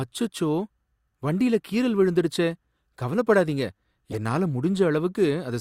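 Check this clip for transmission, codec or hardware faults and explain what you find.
There's one codec fault. From 4.11 to 4.16 s, just after "வண்டில கீறல் விழுந்துடுச்சே கவலைப்படாதீங்க", a corrupt frame decoded: flipped bits in a couple of compressed frames got played anyway, throwing energy to wrong frequencies as a short chirp, squeak, blip or burst of noise around -20 dBFS.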